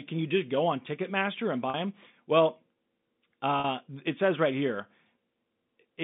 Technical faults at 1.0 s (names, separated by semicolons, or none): none